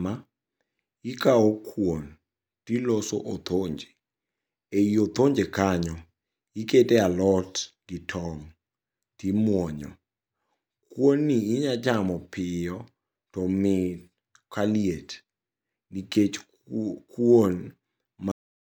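A cut-off end arrives at 18.32 s, where the speech stops abruptly in the middle of a sound. The final buffers of audio were never written out, so instead of decaying naturally the signal falls straight into digital silence for the remaining 0.35 s.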